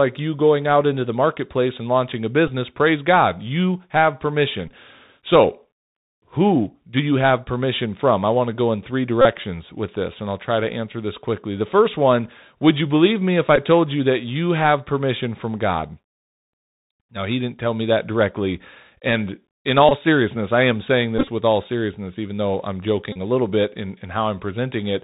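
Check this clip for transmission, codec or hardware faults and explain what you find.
Two faults are present: a narrowband codec colouring the whole speech clip, and short buzzy dropouts at seven points.

Bluetooth CVSD headset codec, throughout: the speech is dull, with a granular hiss, scratchy s sounds and distortion on loud highs. This fits a 64 kbps CVSD link, whose one-bit adaptive steps pass nothing above 4 kHz.

Bluetooth headset packet repeated, at 2.48–2.50, 4.68–4.70, 9.21–9.26, 13.56–13.58, 19.89–19.92, 21.18–21.29 and 23.12–23.17 s: brief buzzes near 267 Hz. The headset decodes the last packet's bits again every 3.75 ms after losses. The longest unbroken losses are at 9.21 s, between "to go in three" and "with this and I'll", and at 23.12 s, between "seriousness even though I'm" and "a little bit in". At 21.18 s the loss is scattered across about 100 ms.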